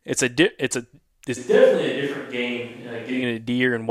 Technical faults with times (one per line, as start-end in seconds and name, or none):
1.38-3.21 switch to a distant microphone